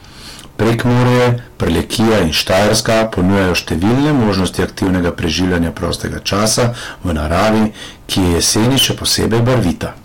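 Hard clipping runs through the whole speech, overdriven by about 23 dB so nearly a third of samples hit the ceiling. The waveform shows squared tops and the spectrogram shows smeared upper harmonics, heard as harsh fuzz.

Loud pops land at 1.67–1.69 s and 4.87–4.89 s, roughly 15 and 10 dB above the speech. Each is a lone waveform spike and a vertical spectrogram stripe, likely caused by a switch or static transient.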